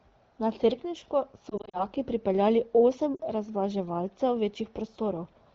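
Lost AMR speech frames show up between 1.49 and 1.84 s, just before "pripeljali osem": brief gaps, none over 40 ms, that the decoder papers over with repeated pitch at falling gain, so you hear quick warbly dips. After "pripeljali osem", a 40 ms loss at 3.16 to 3.21 s does the same.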